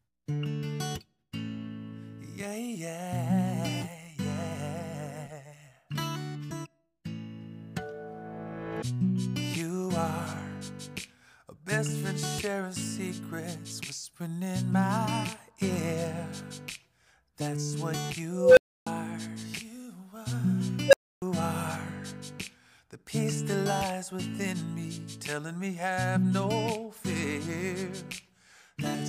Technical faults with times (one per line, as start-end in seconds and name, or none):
18.31-18.87 unstable filter
20.88-21.22 unstable filter